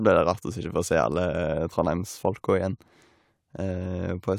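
Listening to this short speech recording, nothing technical stood out at any point.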